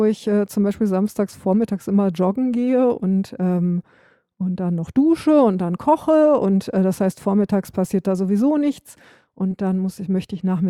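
Around 9.51 to 9.54 s, just after "passiert da sowieso nichts", compressed frames are skipped: the decoder never plays a short run of encoded frames, either because they are missing from the stream or because they were rejected as damaged. The speech lurches forward by about 40 ms, which fits two 20 ms frames.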